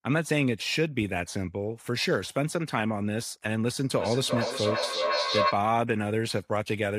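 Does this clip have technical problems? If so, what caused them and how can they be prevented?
Yes. From 3.96 to 5.69 s there is feedback echo between two devices. A second device on the same call replays the speech into this microphone, and the echo canceller cannot remove it. Each word returns roughly every 0.4 s, reaching about the same level as the speech, so the repeats pile up. A spectrogram shows the same speech pattern stacked at regular intervals, and the waveform does not decay. To prevent it, mute or leave the call on all but one device in the room, or use headphones.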